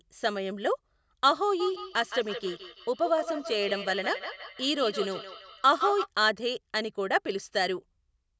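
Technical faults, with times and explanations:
1.6 to 6.1 s, feedback echo between two devices: the speech keeps coming back roughly every 150 ms, thinner and more ringing each pass, peaking about 9 dB below the direct sound. Two devices in the room are feeding each other, and neither canceller catches the other's playback.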